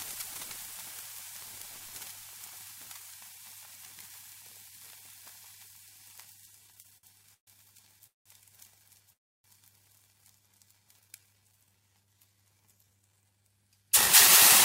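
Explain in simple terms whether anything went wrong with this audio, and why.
Repeated stalls (stutter) run from 6.67 to 8.27 s: the sound catches eleven times, the longest hold lasting 184 ms. Data kept arriving late, so the receiver's jitter buffer emptied repeatedly and it stretched the last sound to cover each wait, adding about 460 ms without losing anything.

A call audio freeze hits at 9.12 to 9.46 s, where the sound stops and about 310 ms of silence follows before it picks up exactly where it left off. Delayed data likely drained the jitter buffer, so the receiver paused rather than skipping ahead.

A jitter buffer slow-down spans 10.59 to 13.34 s, with the sound playing at about 84% speed but unchanged pitch and drawn out. Running short on reserve, the receiver repeated tiny slices of sound to rebuild it, adding 445 ms.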